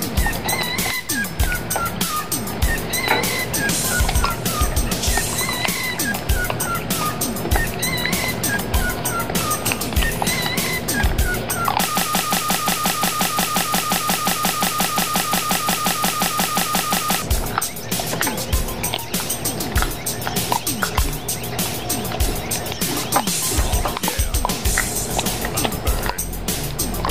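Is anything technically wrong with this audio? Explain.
Yes. From 11.97 to 17.22 s, a broken-record loop repeats one 177 ms fragment about 30 times back to back, likely from a stalled player or stream, replacing the missing audio.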